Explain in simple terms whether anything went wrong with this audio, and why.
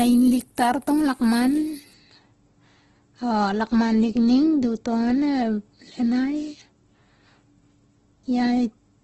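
The speech sounds grainy and rough from start to finish, with a hiss woven into it and no crisp sparkle above 12.2 kHz. That points to heavy Opus compression, which likely squeezed the file so hard that missing detail was replaced with noise.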